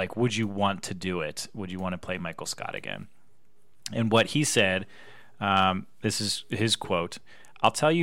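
Nothing stood out on listening through the speech in this recording.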